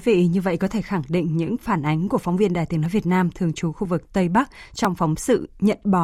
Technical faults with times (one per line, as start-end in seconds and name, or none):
0.87 audio missing between chunks
1.87 audio missing between chunks
2.86 audio missing between chunks
3.85 audio missing between chunks
4.85 audio missing between chunks